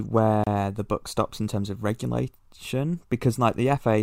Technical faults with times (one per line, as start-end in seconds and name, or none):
0.44-0.47 gap at a join of encoded pieces